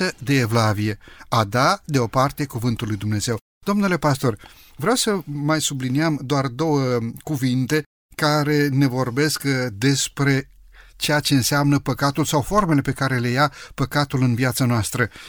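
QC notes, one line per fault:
No faults detected in this clip.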